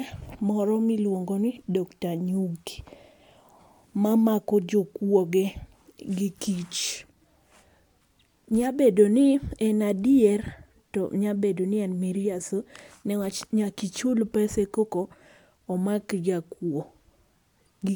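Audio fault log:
No technical faults are present in this speech recording; the signal holds steady and continuous across its whole span.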